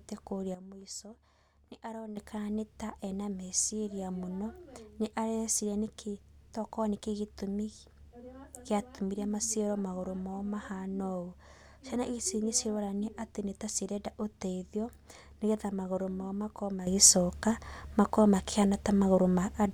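A gain setting was likely applied instantly, without a ramp. It produces a sudden gain jump at 0.55 s, where speech and background noise drop together by about 11 dB until 2.17 s. A second jump at 16.87 s raises both by about 10 dB to the end.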